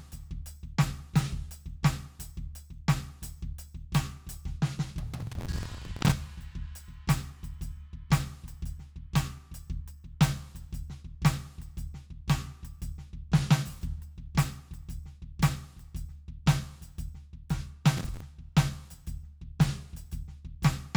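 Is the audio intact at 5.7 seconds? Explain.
No. From 5.20 to 6.12 s the music suffers processor overload crackle: the processor repeatedly fails to finish its small audio buffers, around 10 ms each, in time, and each miss replays old audio with hard edges, producing a gritty tearing crackle that rides on the music.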